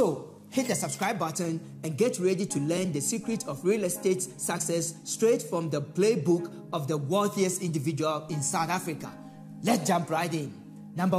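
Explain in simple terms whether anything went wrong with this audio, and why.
Twice, fresh audio failed to reach the playback device in time, so it replayed its last tiny chunk of about 5.8 ms, which fits a 256-sample buffer. This is a repeated buffer. At 1.45 s the chunk plays two extra times, and at 9.79 s once more, each heard as a brief click or buzz.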